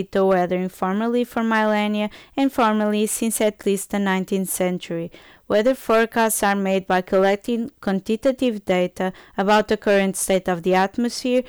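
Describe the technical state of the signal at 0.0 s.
Hard clipping is present at 0.0 s and runs throughout. The speech is driven about 10 dB too hot, so a small share of peaks are cut flat, adding harsh crackle.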